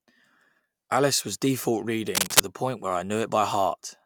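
From 2.15 to 2.40 s, just after "was default" and before "the point where I", cable scratch noise breaks in. Dense, uneven bursts of scratching sit louder than the speech for a quarter second. A worn connector or cable shifting under movement is the likely cause.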